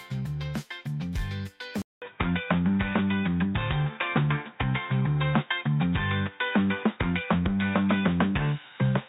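At 1.82 s the sound drops out for 200 ms, then comes back duller and boxier, with nothing above 3.8 kHz, a level shift of a few dB and a new, faint noise floor. That's likely the input switched to a poorer device, and it stays that way to the end.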